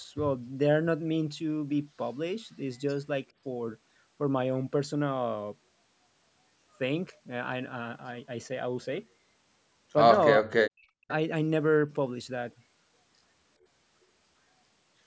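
From 10.4 to 11.09 s the speech sinks by roughly 40 dB, likely speech suppressed in double talk as the echo canceller ducked both sides.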